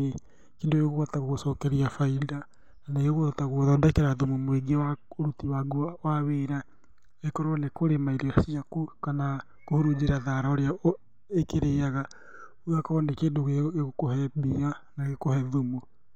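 No dropouts, clicks, level jumps, distortion or timing errors turn up anywhere in this speech recording.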